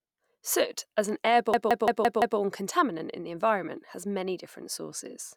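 At 1.54 s the speech locks into a system hang loop that runs until 2.39 s. The machine or its audio driver froze while the sound hardware kept replaying the same ring buffer. You get one 171 ms slice repeated exactly, five times, at about 5.9 Hz. That's a choppy machine-gun stutter rather than a buzz, and the length fits an 8192-sample buffer. Playback then picks up with essentially nothing lost.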